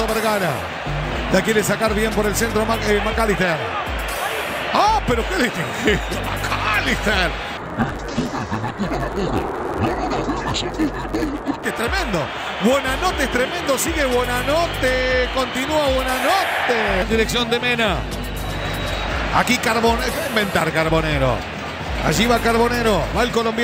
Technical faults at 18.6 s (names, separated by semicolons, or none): none